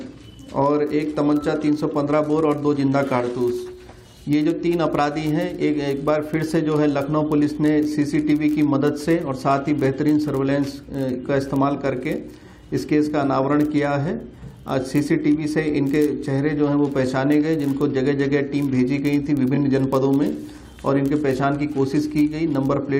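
Throughout, a block size mismatch (padded) leaves a tiny zero gap in every block, producing a steady 46.9 Hz buzz, consistent with 1024-sample reads. Playback runs negligibly slow. From 19.55 to 19.57 s, repeated frames replay one roughly 21 ms chunk, heard as a brief stutter that lengthens the audio by 21.3 ms.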